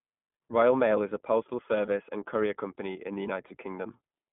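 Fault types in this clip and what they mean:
iLBC codec: A narrowband speech codec coding each 20 ms frame independently. Here the sound stops above about 3.4 kHz and has a plainly rough, synthetic edge.
lost iLBC frames: Missing packets were filled by repeating the last pitch cycle with noise. Brief buzzy holds occur near 1.86 and 3.48 s, each fitting one lost 20 ms frame.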